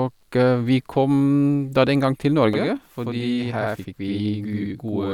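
From 2.53 s to the end, a channel delay (doubling) appears: one channel runs about 85.3 ms late, which fits a 4096-sample buffer, and the mono sum carries an equal-level slap echo. On the waveform, every onset repeats 85 ms later; the spectrogram shows each onset doubled.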